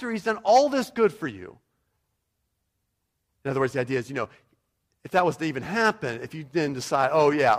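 No technical faults can be heard anywhere in the speech, so there is nothing to describe in time order.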